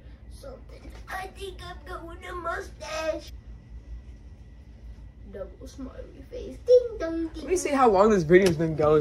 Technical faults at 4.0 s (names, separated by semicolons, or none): none